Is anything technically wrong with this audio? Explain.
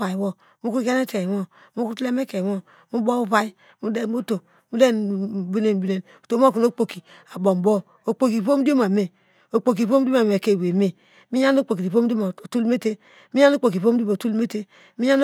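No, nothing technically wrong can be heard in this speech recording. No audible fault turns up at any point in the clip.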